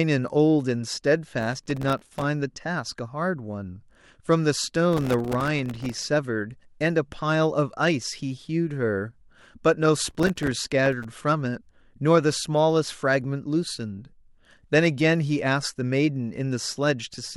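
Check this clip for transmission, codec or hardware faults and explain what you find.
Three bursts of processor overload crackle, at 1.41–2.24 s, 4.93–6.07 s and 10.05–11.04 s. The processor keeps missing deadlines on very short buffers, a millisecond or two each, leaving dozens of hard-edged silent gaps. The result is a gritty crackle over the speech rather than the longer, sparser dropouts of network loss.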